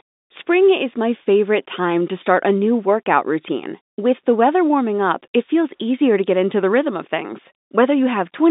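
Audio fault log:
No faults heard anywhere in this speech recording.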